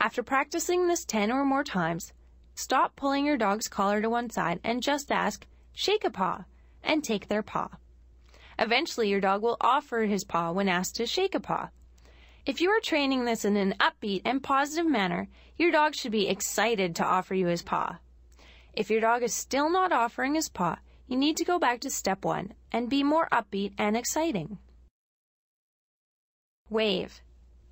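No audible defect anywhere in the recording; nothing to flag.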